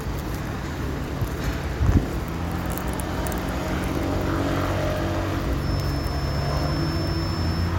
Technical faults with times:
5.55-7.79 feedback whistle

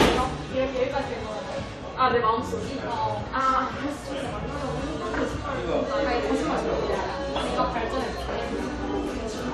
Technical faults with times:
0.00-9.53 generation loss

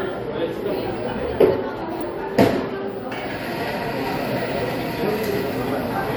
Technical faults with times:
2.01-2.03 damaged data in a compressed stream
5.52 damaged data in a compressed stream

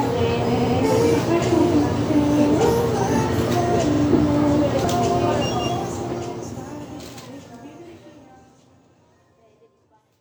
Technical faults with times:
0.56-0.74 repeated frames
3.93-4.02 repeated frames

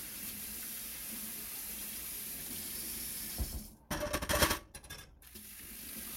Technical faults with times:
0.00-6.17 doubled audio track
3.69-6.17 time-stretched section

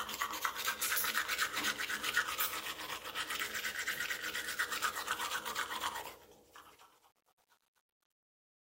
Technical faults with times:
6.04-8.69 truncation distortion on a fade

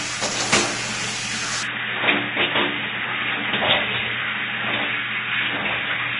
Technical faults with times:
0.00-6.19 transcoding between lossy codecs
1.63-6.19 input switched to a poorer device

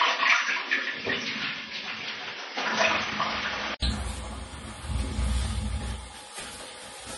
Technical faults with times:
0.00-7.18 MP3 compression
0.00-3.82 input switched to a poorer device

